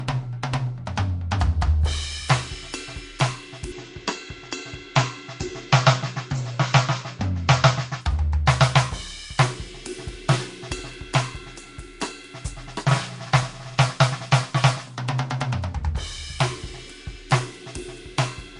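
Throughout the music, plainly audible codec damage gives a rough, hissy, smeared texture with nothing above 10.6 kHz, likely Nellymoser compression at a bitrate around 44 kbps, filling weak bands with noise. From 3.72 to 8.01 s, the band narrows to 7.6 kHz with added background noise about 45 dB down and no gap, likely the input switched to a poorer device before switching back.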